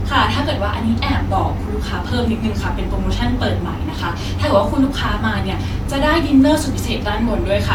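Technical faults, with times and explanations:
Throughout: generation loss. The speech is swirly, hollow and smeared, attacks blur, and nothing sounds above 17.3 kHz. One encode near 66 kbit/s wouldn't sound this bad. It likely comes from about three Vorbis-style passes, each requantising on a shifted frame grid, compounding noise and spectral holes.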